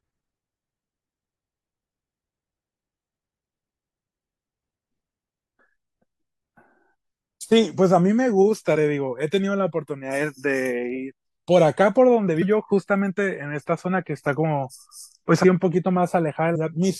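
At 16.54 s the speech jumps forward. Compressed frames were skipped, lost from the file or rejected by the decoder. Roughly a fifth of a second of audio vanishes, which fits about fifteen frames.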